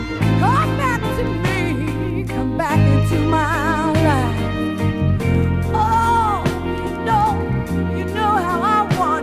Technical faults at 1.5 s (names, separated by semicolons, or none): none